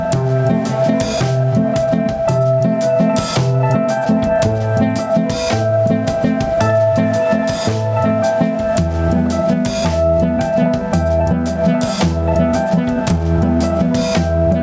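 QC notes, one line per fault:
throughout: gain pumping. The gain ducks by around 10 dB under each loud sound, so loud and soft passages sit close in level and the sound feels squashed. The likely cause is input gain set far too high, with a fast limiter or compressor clamping each peak. The waveform shows a flattened envelope. The spectrogram shows nothing above the call path's 8 kHz ceiling.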